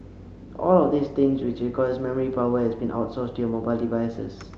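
Nothing goes wrong anywhere in this bit of speech, which has simply come over an ordinary WebRTC call path, where the Opus coding tops out around 8 kHz, just what you'd expect from a call setting that fits something like 32 kbps.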